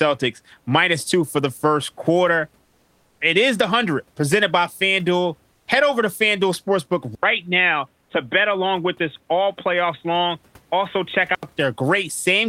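Just after "for the first quarter", from 2.67 to 3.19 s, the room background gives way to a flat, featureless hiss about 3 dB quieter, and again from 5.55 to 5.67 s, about 8 dB down. This is comfort noise in place of the background, likely from Opus discontinuous transmission filling the pauses.

At 7.15 s an 80 ms gap opens and the speech turns dull and boxy, with nothing above 3.8 kHz, though the level stays about the same, until 11.43 s. The input likely switched to a poorer device with a narrower band and its own faint noise floor.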